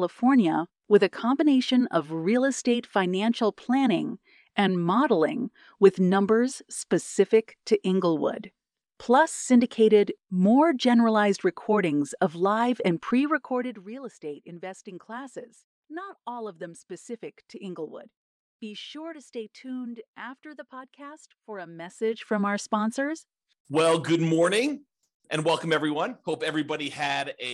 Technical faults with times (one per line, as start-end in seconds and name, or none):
13.32-13.92 zipper noise
21.76-22.28 zipper noise